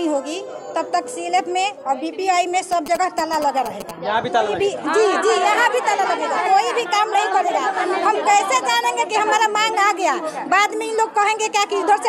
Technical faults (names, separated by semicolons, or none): GSM signalling bursts